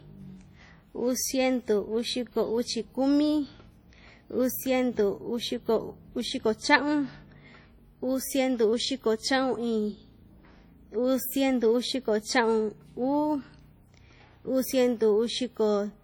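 From start to finish the speech carries a ringing, washy smear, with a hiss that swells and fades along with the voice and quieter detail sounding thinned out. That's most likely WMA compression at a low bitrate, something around 32 kbps by the sound of it. The transform coder spreads its quantisation noise over long blocks, so the errors blur across tens of milliseconds, and the weaker spectral lines get dropped entirely. The damage here is heavy.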